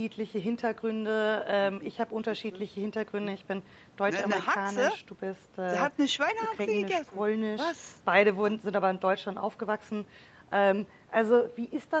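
Speech with no technical faults to be heard. The call path shows in the band limit, with nothing above about 8 kHz, as expected from the call processing and codec.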